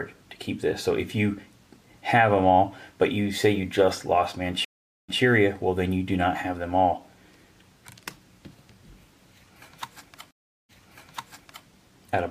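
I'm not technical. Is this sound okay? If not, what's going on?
No. There are two stream reconnects, at 4.65 s and 10.31 s. Each time the connection dropped, so the sound cuts out for about 0.4 s. Playback then restarts in the past, repeating about 0.12 s the first time and nearly a full second the second time.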